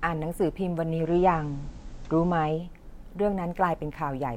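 At 0.85 s the speech drops from the digital stream into the station's FM analogue feed, a digital radio blending to analogue, and returns to digital at 2.72 s. Each crossover is a 315 ms blend. While on FM, the level shifts by about 3 dB, and a low background hiss sits roughly 35 dB under the speech. The receiver lost the digital signal and fell back to the analogue copy.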